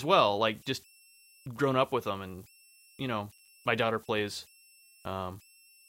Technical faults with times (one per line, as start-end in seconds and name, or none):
0.00-5.89 converter idle tones
3.32-3.48 processor overload crackle